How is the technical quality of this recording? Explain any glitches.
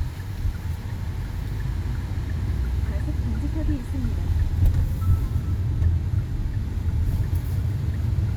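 The technical quality of this recording of everyday sounds is sound, with no glitches to explain.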